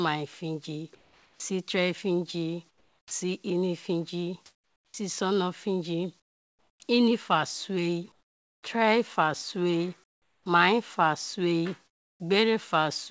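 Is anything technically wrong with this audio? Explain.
Yes. This speech clip has three kinds of voice-detector fault, all consistent with discontinuous transmission on a call link.

Sound chopped by the voice detector, from 0.95 to 3.11 s. The sender's detector likely flipped repeatedly between transmitting and staying silent across this stretch, so about 0.87 s in total of quieter syllables and word edges was replaced by synthetic fill. The speech sounds choppy, with fragments dropping out.

Comfort noise in place of the background appears at 4.46 to 6.80 s (ending just before "inifa sue tre fa"), 8.12 to 8.63 s, 10.04 to 10.46 s (between "sue tre fa sue" and "mai fa sue"), and 11.87 to 12.20 s (right after "sue mai fa sue"). During pauses the sender likely stopped sending audio, and the receiver generated featureless noise roughly matched to the background. The real ambience vanishes and a smooth, lifeless hiss takes over. 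Compared with the real background, that hiss drops by about 12 dB at 8.12 s, about 14 dB at 10.04 s and about 20 dB at 11.87 s.

Onset clipped by the voice detector, at 4.88 to 4.94 s. The detector likely reacted late when speech resumed, so the first 60 ms of the word were never transmitted and comfort noise filled the gap. The word therefore starts abruptly, missing its soft attack, as if it were switched on mid-sound.

The audio also passes through a call codec with nothing above 8 kHz, which fits G.722 at 64 kbps.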